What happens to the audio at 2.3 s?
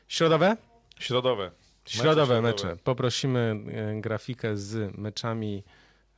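Nothing goes wrong at 2.3 s; the speech there runs on intact through the call path, with no dropout, glitch or other fault at that moment.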